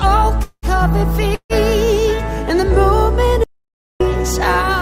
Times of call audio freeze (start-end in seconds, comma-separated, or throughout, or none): 0.43-0.66, 1.35-1.53